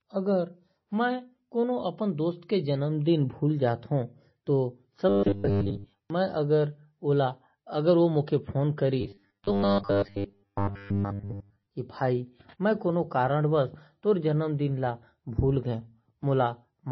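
From the start, the whole recording has heavy MP3 compression damage, likely from a very low bitrate, something around 24 kbps. Nothing comes through above about 5.9 kHz, so the speech sounds dull and boxed in. With bits that scarce, the encoder keeps dropping weak frequency lines from frame to frame, which gives that watery, swirly texture, metallic chirps on the s sounds, and smeared attacks.

Between 5.09 and 6.10 s, and again from 9.01 to 11.69 s, the speech turns into a rigid metallic buzz. That's robotic sound from repeated short buffers. New audio isn't arriving often enough, likely because of a stalled stream or audio thread, so the same 10 ms chunk gets replayed over and over while most of the real signal is skipped. Looping 10 ms stamps a fixed 100 Hz pitch on everything, and the speech only loosely follows its original shape underneath.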